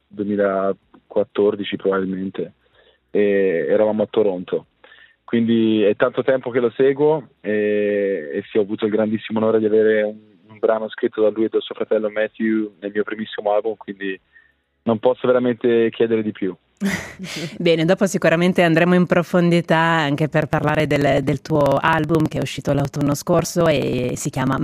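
From 20.42 to 24.58 s, periodic USB or driver dropouts skip roughly 10 ms every 0.054 s, giving rapid regular ticks; the waveform shows evenly spaced discontinuities, the spectrogram thin vertical lines.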